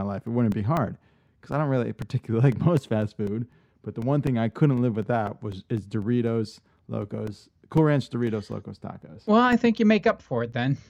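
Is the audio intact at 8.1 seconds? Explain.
No. At 8.1 seconds the clip is inside a run of periodic USB or driver dropouts lasting from 0.27 to 10.78 s: every 0.25 s the bus or driver stalls, roughly 2 ms of audio is replaced by silence, and the speech carries a regular ticking.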